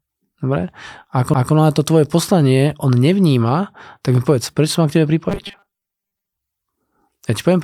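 A CD skip at 1.34 s: the laser jumped to another turn of the spiral, leaving a mute of a few milliseconds before playback resumed elsewhere in the speech.

Robotic sound from repeated short buffers runs from 5.30 to 6.37 s as a rigid 200 Hz buzz, likely from 5 ms chunks being repeated, with roughly half the audio replaced by repeats.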